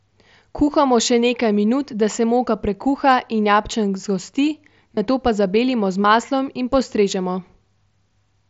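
Concealed Bluetooth headset packet loss hits this speech clip at 4.95–4.97 s just before "nato pa zabelimo z", at 6.03 s just before "maslom in postrežemo", and at 7.35 s right after "z maslom in postrežemo". Gaps of about 22.5, 15 and 7.5 ms were filled by repeating a matching slice of the preceding waveform, leaving brief buzzy patches and slight warbles at the first two, while the last is nearly hidden. All of this sits within the wideband mSBC headset path's 8 kHz range.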